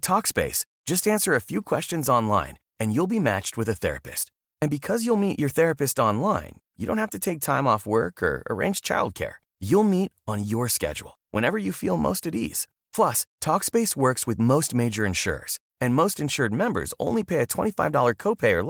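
Nothing here needs flagging: it's a speech recording carried over Opus voice compression in hybrid mode at around 24 kbps with the full audio band kept, and nothing stands out as a problem.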